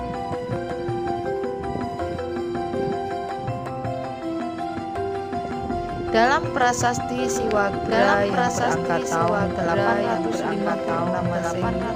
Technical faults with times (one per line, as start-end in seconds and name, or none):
7.23-11.95 doubled audio track